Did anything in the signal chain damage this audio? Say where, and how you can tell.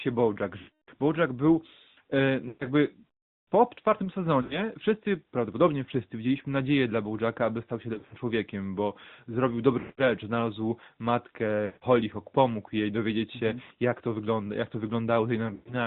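Yes. The audio is buzzy, synthetic and dull, with nothing above 4 kHz. This is the AMR narrowband mobile codec at 10.2 kbps, modelling the voice coarsely.

Lost AMR speech frames on the network path cause drawn-out, fading warbles at 0.58–0.90 s, 2.48–2.66 s after "był e", 4.42–4.63 s after "po czwartym", 7.94–8.14 s, 9.80–10.03 s, 11.66–11.84 s, 13.64–13.71 s after "jej dowiedzieć się mm" and 15.54–15.75 s. The decoder repeats its last good frame with falling gain.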